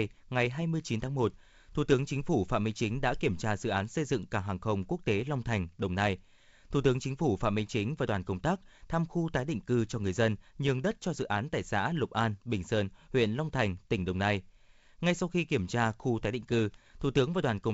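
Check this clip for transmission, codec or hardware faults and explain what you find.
Nothing wrong turns up here at all, just ordinary wideband telephone speech of the sort a G.722 link carries, with nothing amiss anywhere along the way.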